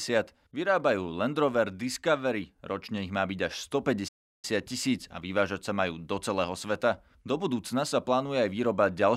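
A playback stall runs from 4.08 to 4.45 s: the speech cuts to silence for about 0.35 s, then resumes with "tisíc a vyvážať sa". The likely cause is the player briefly running out of buffered data or its thread being blocked.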